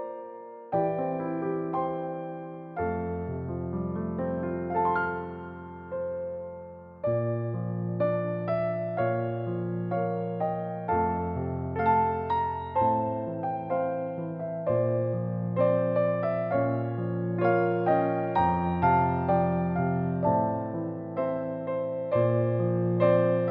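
There's one sharp click at 20.16 s, a thin vertical line in the spectrum, likely dropped samples, with about a single sample missing so the waveform jumps.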